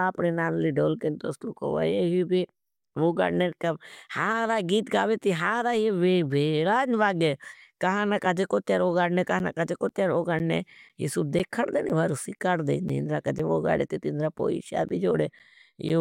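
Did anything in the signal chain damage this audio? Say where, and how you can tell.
Yes. From 9.39 s to 15.90 s, just after "कहाना काजे कोट्यार वोगाणने", the speech is broken by a regular tick every 0.5 s, about fifteen in all. Each is a short hole of around 10 ms where the sound drops to silence. This is periodic USB or driver dropouts at the driver or buffer stage: something blocking the USB bus or audio driver on a fixed schedule starves the stream, and the lost samples are replaced with silence.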